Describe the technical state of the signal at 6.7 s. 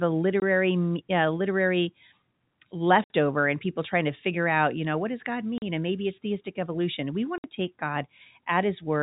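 At 6.7 s the speech signal is intact, carried through G.711 telephone coding with no fault at that moment.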